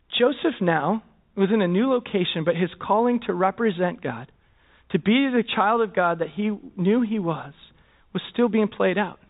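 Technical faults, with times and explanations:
No technical faults can be heard in this speech.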